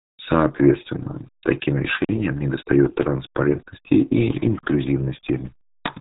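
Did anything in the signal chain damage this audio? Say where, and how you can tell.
Yes. The speech sounds muffled and gargly from start to finish, with nothing above about 3.8 kHz. That points to the RealAudio 14.4 codec at the coding stage. Its dial-up-era coding fits roughly 8 kbit/s, and it discards the upper band and smears what remains.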